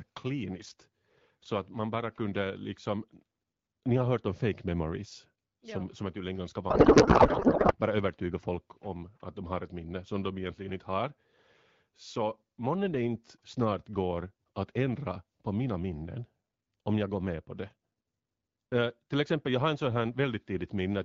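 From 6.69 to 7.73 s, a codec payload misread: octet-aligned AMR frames are parsed as bandwidth-efficient, so the speech turns into garbled, warbling noise.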